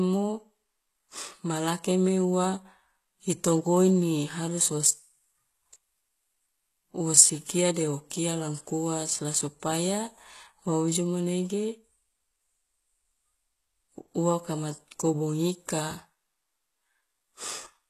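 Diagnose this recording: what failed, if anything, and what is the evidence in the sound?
Throughout the speech the top end sounds bright but synthetic: s sounds come out gritty and lispy, with a metallic sheen, and nothing is present above 12.3 kHz. The failure is at the codec stage, likely HE-AAC compression at a very low bitrate, which fits around 16 kbps. Only the lower spectrum is truly coded; the treble is rebuilt by copying lower bands upward under a coarse envelope, so its harmonics no longer line up with the originals.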